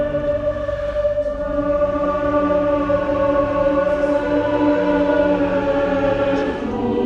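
The signal holds steady throughout, with no audible technical faults at any point in the audio.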